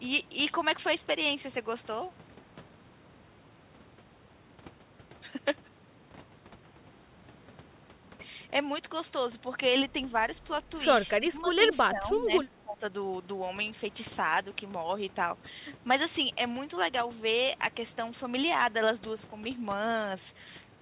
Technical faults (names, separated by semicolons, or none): speech suppressed in double talk